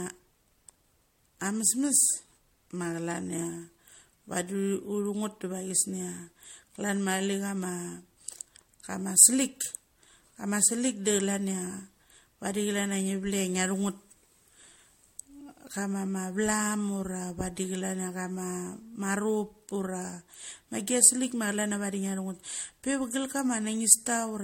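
Repeated MP3 encoding, likely about four passes and consistent with 64 kbit/s, causes generation loss throughout: swirly, hollow speech, blurred attacks, nothing above 16.6 kHz.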